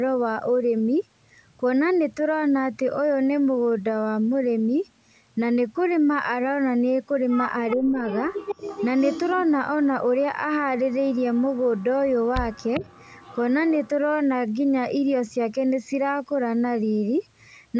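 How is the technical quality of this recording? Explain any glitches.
The speech carries a recurring echo and two brief dips where the talker is pulled down.

Echo leak at 7.7–7.77, 8.09–9.45, 10.92–11.58, 11.77–11.84, 12.52–13.38 and 13.69–13.89 s: a far-end echo canceller likely let loudspeaker sound through, returning a copy about 0.4 s late and roughly 10 to 30 dB under the speech.

Speech suppressed in double talk at 7.77–8.04 and 12.8–12.84 s: with both sides overlapping, the canceller likely ducks the talker, who drops by around 10 dB.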